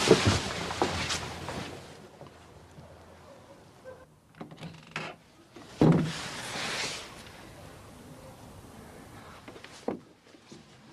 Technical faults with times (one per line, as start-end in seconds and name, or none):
5.48-6.04 zipper noise